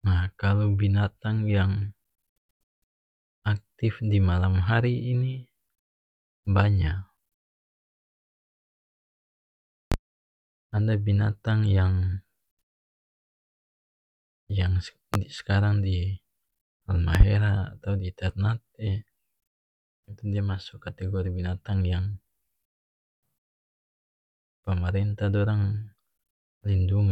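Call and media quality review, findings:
Loud pop, speech: likely voltage transient from plug, switch, static or driver glitch summed into the signal path. Sharp single pops 9.92–9.96 s and 15.14–15.18 s, about 15 dB over speech; double pop 17.15–17.24 s, about 20 dB, just before "atau di ternate".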